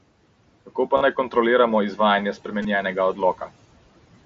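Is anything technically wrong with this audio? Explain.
Yes, there are three kinds of fault in this speech, all carried over an mSBC Bluetooth headset link whose wideband sound is itself intact.

Noise suppressor artifacts run throughout. The suppressor pulls down bands it judges to be steady noise, frame by frame, cutting the room noise by about 18 dB in pauses. Under speech that noise, normally about 17 dB down, swells back.

Bit error spikes occur at 0.81 s, just before "pa naj kontroliramo", and at 2.33 s, just after "pa naj kontroliramo". A flipped bit throws the waveform by a power of two for a single sample, then three samples. Each is heard as one sharp broadband tick.

Concealed Bluetooth headset packet loss occurs at 0.97–1.01 s, just before "naj kontroliramo", and at 2.62–2.65 s. Lost packets were patched by repeating a matching stretch of recent waveform, lasting 37.5 ms and 22.5 ms, which fits five and three lost 7.5 ms frames. 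The patches are a brief buzzy tone with a small warble on recovery.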